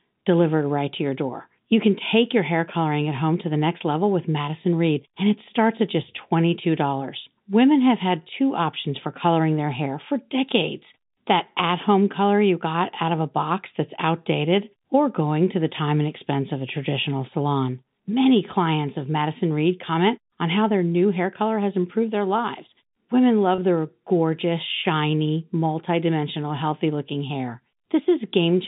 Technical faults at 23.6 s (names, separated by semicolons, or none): packet loss with pitch repetition